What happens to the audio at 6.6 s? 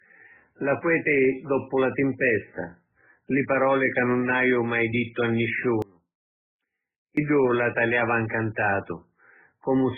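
An audio dropout to a faint residue runs from 5.82 to 7.17 s, after "haju mai dittu a" and before "la taliava". The speech is likely lost upstream for about 1.35 s while the path stays live. It cuts abruptly to a faint trace about 25 dB down, then snaps back.

Transcoding between lossy codecs also colours that moment, as it does the whole clip. The speech likely passed through MP3 at 8 kbit/s and then Opus at 32 kbit/s, so the artefacts of both sit together and nothing remains above 3.6 kHz.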